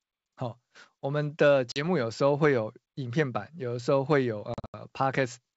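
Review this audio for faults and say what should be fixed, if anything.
Packet loss on an ADPCM call leaves hard-edged silent holes at 1.72–1.81 s (40 ms lost) and 4.54–4.75 s (160 ms lost in scattered gaps, longest 80 ms). Afterwards, the decoder's predictor and step size mismatch the sender's, so speech resumes with brief, slight distortion. Add forward error correction and packet loss concealment with decoder state resynchronisation to the network path.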